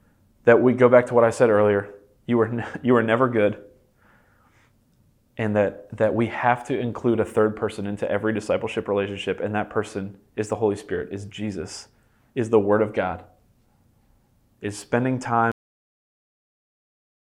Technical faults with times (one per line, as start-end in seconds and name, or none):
15.52-17.33 cut-off end